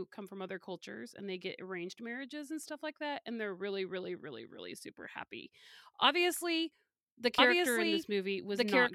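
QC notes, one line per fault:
7.38–8.94 s, doubled audio track: just after "super happy obviously the", a dry, full-band second copy of the speech cuts in abruptly and runs to the end. It trails about one and a half seconds behind at roughly equal loudness, likely from a slower second capture path.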